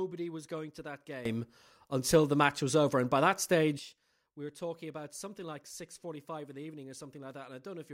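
At 1.25 s, just after "was going to that", the speech and its background noise leap up together by about 14 dB in a sudden gain jump, holding until 3.79 s before "we were talking about". This is likely a gain setting applied sample-to-sample without a ramp. Unlike compressor pumping, the level changes instantly, with no gradual swell.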